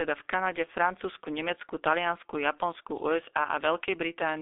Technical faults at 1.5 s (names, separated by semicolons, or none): G.723.1 codec